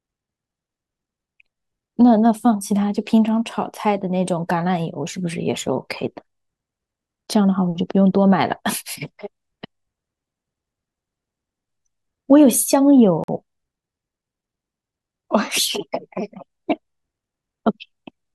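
At 13.24 to 13.28 s the speech drops abruptly into about 46 ms of silence, then resumes where it left off. This is a Bluetooth stall, likely caused by interference delaying wireless packets so the headphones' buffer emptied and playback paused until they arrived.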